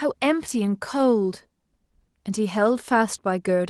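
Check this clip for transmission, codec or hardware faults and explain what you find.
Nothing faulty can be heard in this speech recording.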